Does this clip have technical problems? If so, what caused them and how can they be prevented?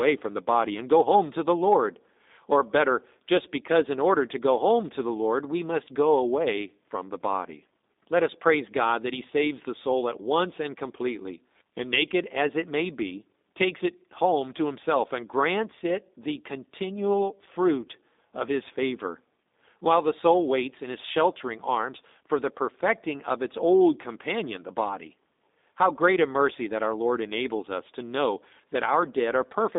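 Yes. Throughout the speech, the audio has passed through a G.729 codec, which fits a narrowband 8 kbit/s telephone path. The codec does not keep the waveform. It rebuilds each short frame from a vocal tract filter, a pitch predictor and a few pulses, so the voice comes out slightly rough and synthetic. The line band runs only from about 200 Hz to 3.7 kHz, with nothing above 3.7 kHz, which leaves it muffled and thin. To prevent this, carry the call over a wideband codec such as G.722 or Opus instead of G.729.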